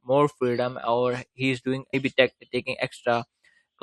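A speech clip with one brief blip at about 1.93 s that lasts a split second. It comes from damaged data in the compressed stream: a small stretch of the encoded file was corrupted, so the decoder could not read those bytes correctly. It either produced garbage for that frame or threw it away, then lost sync and had to search for the next valid frame header before normal audio resumed.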